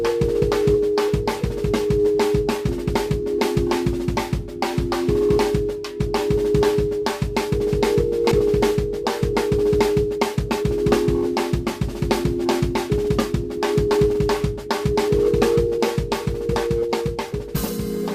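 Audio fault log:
8.31–8.33 s, skip ahead: about a second and a half of audio is missing, and the two sides are butted together with no gap or fill. Unlike a dropout there is no silence or smeared patch, only an abrupt jump forward in the sound.
9.56–10.91 s, 12.24–15.10 s, 15.57–15.79 s and 16.46–17.52 s, jitter buffer speed-up: the receiver trimmed excess buffered delay by cutting out many tiny pitch-period slices. The audio runs 106%, 109%, 123% and 113% fast while pitch stays unchanged. That steady pitch distinguishes it from a clock or resampling error.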